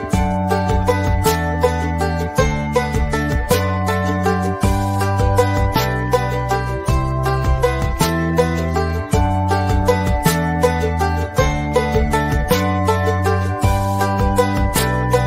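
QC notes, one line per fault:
No faults found.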